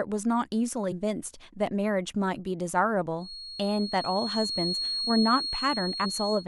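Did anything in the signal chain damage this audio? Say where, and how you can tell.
Yes. There is damaged data in a compressed stream, at the codec or storage stage. Three short blips occur: one from 0.91 to 0.93 s, and single ones at 3.32 s and 6.04 s. Each is a brief glitch lasting under about 20 ms. Some bytes of the encoded file were corrupted. The decoder misread those frames, lost sync, and skipped ahead to the next valid frame header.

A feedback whistle also appears at 3.16 s and runs to the end of the speech. It is a thin, steady tone at 4.3 kHz, sitting only a little below the speech level. Its level swells and fades slowly but never builds up. The likely cause is the acoustic path at capture. Sound from a loudspeaker was reaching the microphone with loop gain just under the point of runaway, so one frequency kept ringing.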